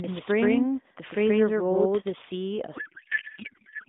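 From the start until 2.12 s there is a doubled audio track. A second full-band copy trails roughly 150 ms behind, at about the same level. It has no decay or room colour, and it cuts off abruptly. A slower capture path is the likely cause.

At 2.76 s a codec payload misread begins and runs to the end. The narrowband AMR stream is octet-aligned but is read as bandwidth-efficient. Its bits land in the wrong fields. The speech becomes garbled noise and warble that barely tracks it.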